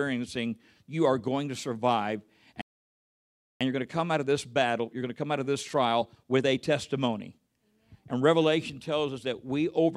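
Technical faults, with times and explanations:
2.61 to 3.61 s, playback stall: the player most likely ran short of buffered data, or its output thread was held up, so nothing reached the output for about 0.99 s. The speech cuts off abruptly mid-flow and a full second of silence follows. Because no new samples were delivered during that gap, the sound simply halts and then resumes.
3.61 to 6.61 s, time-compressed catch-up: having fallen behind during the stall, the player works through its backlog by dropping small slices of audio and cross-fading across the joins, running about 1.1 times faster for three seconds. The speech sounds hurried but keeps its normal pitch, since the waveform is shortened rather than resampled.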